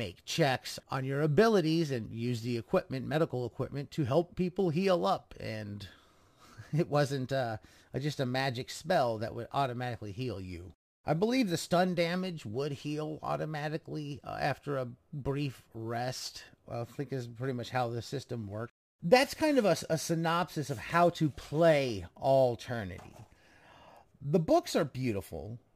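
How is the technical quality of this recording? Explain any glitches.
The recording has a persistent technical flaw: a gritty, inharmonic fizz rides on the speech from start to finish.

Crude rate conversion runs throughout. The fizz follows the louder and brighter parts of the speech, sitting roughly 30 dB below it. Samples were dropped at a regular interval without filtering, a pattern that fits a 48 kHz to 44.1 kHz change, producing shifted, inharmonic copies of the voice.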